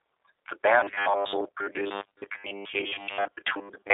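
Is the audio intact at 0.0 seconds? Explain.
No. The G.729 codec damage runs throughout, including 0.0 s. Speech sounds rough and synthetic, fitting 8 kbit/s. Nothing passes above 3.8 kHz.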